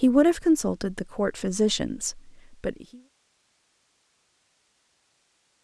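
Nothing here is a fault: the speech simply eases out in a smooth, editor-style fade that begins at roughly 2 seconds and is gone by about 3.1 s, with no click or hard edge.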